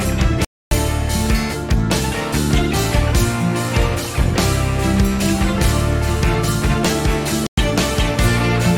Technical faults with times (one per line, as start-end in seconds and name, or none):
0.45-0.71 Bluetooth stall
7.47-7.58 Bluetooth stall